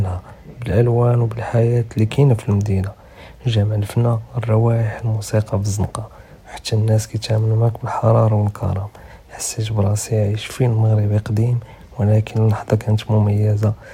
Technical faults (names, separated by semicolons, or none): none